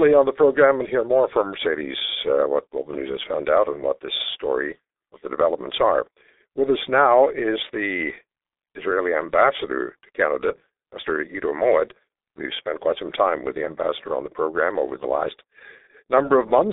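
G.723.1 codec damage runs through the whole speech clip: nothing survives above about 3.8 kHz, the band sits near 300 Hz to 3.7 kHz, and heavy coding at what sounds like 6.3 kbit/s, in 30 ms frames with a slowly updated voice model, leaves it muffled and hoarse with smeared consonants.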